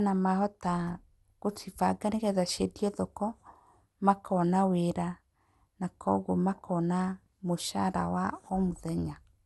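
Speech throughout shows generation loss. It sounds swirly, smeared and hollow, with nothing above 11.8 kHz, likely from about five passes through a codec resembling MP2 at 96 kbit/s.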